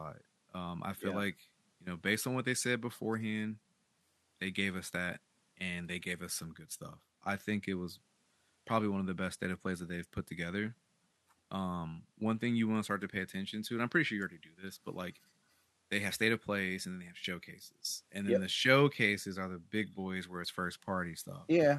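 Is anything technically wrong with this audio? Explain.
No, nothing in this speech recording points to a technical fault. A faint room noise sits about 42 dB below the speech, which belongs to the space where it was recorded rather than to the system.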